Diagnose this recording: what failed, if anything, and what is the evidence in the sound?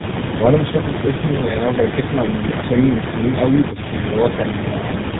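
The failure is at the codec stage: tandem speech coding, with the speech decoded and re-encoded at each network border. Throughout, the sound is rough, muffled and warbly, with nothing above about 3.8 kHz. Each coder quantised the errors left by the one before, so the damage compounds. That separates it from a single low-rate codec, whose artefacts stay milder. The sound fits three speech coders in a row, ending in GSM full rate.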